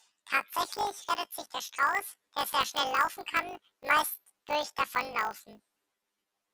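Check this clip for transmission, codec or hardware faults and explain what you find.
One fault runs through the whole speech clip: planar audio read as interleaved. Each 20 ms block stores all left samples, then all right samples. The player reads them as alternating pairs instead. So every block plays twice at double speed, first the left half, then the right. That is a shift of 12 semitones. The overall pace stays correct. At this short block length, the result is a robotic buzz at 50 Hz, the block rate, rather than a clean octave jump.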